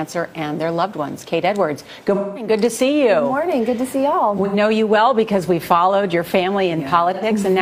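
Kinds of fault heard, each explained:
AAC frame loss with concealment: Compressed AAC frames failed to arrive, so the decoder patched each gap by rebuilding audio from the last good spectrum. This happens three times: a longer dropout of about 0.21 s from 2.14 to 2.50 s, then shorter ones of about 0.09 s near 4.45 s and 7.13 s. Each patch replaces the real sound with a brief smeared, noisy or phasey stretch.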